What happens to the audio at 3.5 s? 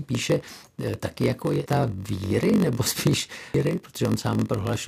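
At 3.54 s there is a brief glitch, a sharp instant where the speech turns garbled. That is damaged data in a compressed stream. Part of the encoded data at that point was wrong, so the decoder could not read the frame there. It lost sync and hunted for the next valid frame header, and the glitch marks that misread.

Underneath, and running through this moment as through the whole clip, is a steady buzz at about 46.9 Hz. The speech also drags slightly, playing at 0.938 times normal speed while keeping roughly its normal pitch. This is a block size mismatch (padded). The reading stage takes 1024-sample blocks but receives shorter ones, which fits roughly 960 samples written per block. The remainder of each block is filled with zeros, producing a short silent gap every block that sounds as the buzz and stretches the timing.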